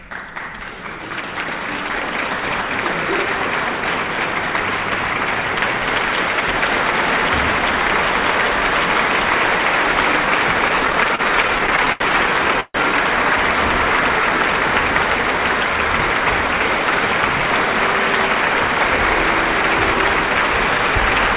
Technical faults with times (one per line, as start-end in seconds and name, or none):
10.68-12.02 repeated stalls (stutter)
12.60-12.76 call audio freeze
17.18-19.95 jitter buffer speed-up